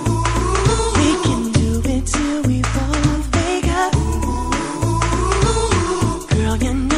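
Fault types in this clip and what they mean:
MP3 compression: likely a 64 kbps encode starving the coder of bits, so weak frequency lines drop in and out, leaving plainly audible watery swirl throughout.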